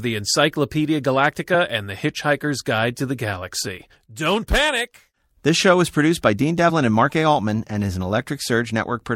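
At 3.77 s, compressed frames are skipped. Roughly 40 ms of speech vanishes, pointing to about two lost frames. The speech jumps ahead at the join.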